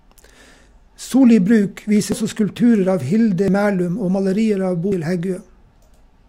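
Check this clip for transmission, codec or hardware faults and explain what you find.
The speech has three jumps that point to a dropped buffer (overrun), at 2.12 s (just before "også skulpturer av"), 3.48 s and 4.92 s. The likely cause is audio not collected before the hardware overwrote it, so the remaining ends are spliced with no gap. Each is a jump with the speech skipping ahead, by about a tenth of a second at 2.12 s and 4.92 s and a few hundredths at 3.48 s.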